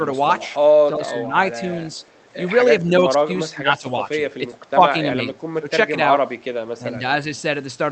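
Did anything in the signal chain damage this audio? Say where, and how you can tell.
Yes. Speech suppressed in double talk, in call processing: the speech dips by roughly 5 to 20 dB at 0.88–1.35, 2.8–3.29, 3.52–3.88, 4.38–4.81, 5.16–5.67 and 6.78–7.03 s. The level ducks rather than dropping to silence, which likely points to an echo canceller clamping during overlap.

Echo leak, also in call processing: at 1.95–2.28 s a very faint copy trails the speech by 384 ms, likely residual loudspeaker echo. It is a discrete delayed repeat rather than smeared room reverb.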